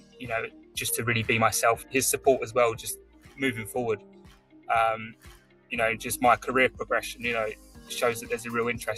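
Throughout the clip, a noise suppressor applied to music or sounds is at work. A speech-tuned suppressor treats steady tones, sustained material and decays as background noise and pulls them down, while sharp onsets pass. The gain swings by something like 15 dB, so the sound pumps and thins, with held portions and tails sinking after each attack.

Sound cut by the noise suppressor is clearest in six places: 0.00–0.24 s (about 13 dB down), 0.48–0.77 s (about 14 dB), 2.96–3.40 s (about 13 dB), 3.97–4.69 s (about 16 dB), 5.11–5.72 s (about 16 dB) and 7.55–7.90 s (about 11 dB). In each stretch the suppressor misjudged the sound as noise, so the level sags or the decay is chopped short while the start comes through.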